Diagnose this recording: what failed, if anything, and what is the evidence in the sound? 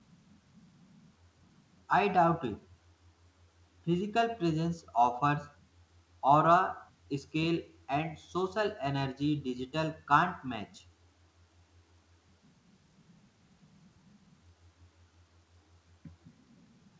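Nothing failed here: the speech came through a call path whose top end stops at 8 kHz, which fits a G.722 wideband codec working as designed.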